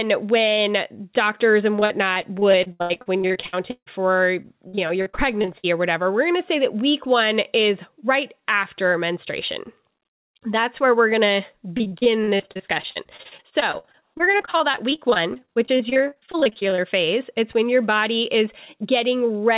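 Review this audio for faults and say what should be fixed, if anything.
Repeated packet loss (robotic sound) at 1.76–3.88 s after "when doctors", 4.42–5.65 s before "or whatever we're going", and 11.77–16.80 s after "where we're going to". Dozens of short holes, none longer than 157 ms, are each patched by stretching the last sound, so roughly a quarter to a third of each stretch is filled in. That makes the sound choppy rather than producing the single clean silence of one dropout. Preventing this means improving network stability, for example by prioritising call traffic or enabling forward error correction so that lost packets can be rebuilt instead of papered over.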